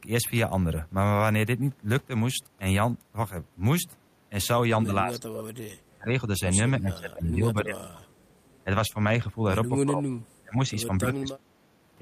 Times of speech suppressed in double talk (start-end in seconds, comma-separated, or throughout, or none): 4.74-5.53, 5.89-8.22, 8.65-11.59